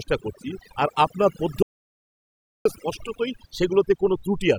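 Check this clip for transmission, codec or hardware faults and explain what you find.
Two faults are present. One runs through the whole recording, and one is a gap near the middle.

Overdone noise removal affects the speech from start to finish. A noise reduction stage was set far too aggressively. It pulls individual frequency bands down hard whenever they sit close to its noise estimate. Quieter parts of the voice fall below that line and get cut along with the noise. The result is a background of near silence with twinkling specks.

An audio dropout to silence runs from 1.63 s to 2.65 s. That is roughly 1.03 s of missing sound. The speech stops abruptly and later resumes mid-flow. The gap is digital silence, with no room tone at all. That points to the input feed being lost while the recording carried on writing silence. A disconnected device or failed link is the likely cause. Whatever was spoken in that second is gone.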